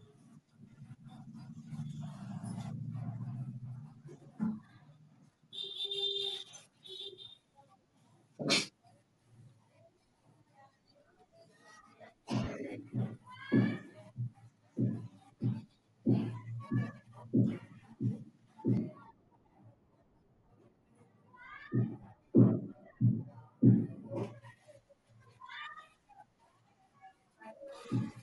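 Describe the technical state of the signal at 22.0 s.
At 22.0 s the speech sits inside a stretch of de-emphasis applied wrongly, running from 18.77 to 24.23 s. A treble cut meant to undo pre-emphasis has landed on audio that never had any, or has been applied twice. The response falls smoothly toward the top, about 11 dB down at 10 kHz relative to 1 kHz. Sibilants and consonant edges lose their bite. The speech sounds dull and muffled, as if heard through cloth.

Right after, at 22.03 s, there is a brief dropout from lost LE Audio frames. The gap lasts 10 ms, which fits one missing frame. The decoder covers it by reusing the previous spectrum with scrambled phase. There is no gap of silence. Instead the sound smears into a short noisy blur. It is too brief to fade away, so it passes as a grainy flick.

Under both, Bluetooth LC3 compression is plainly audible across the whole clip. It is likely the cause of a breathy, grainy edge on the speech. 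The transform codec works in 10 ms blocks. At the rate this suggests, around 48 kbps, parts of the upper spectrum get filled with noise rather than coded exactly. That roughness colours the treble.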